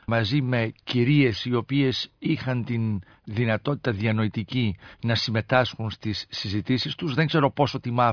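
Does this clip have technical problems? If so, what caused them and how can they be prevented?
No, there are no technical problems in this clip.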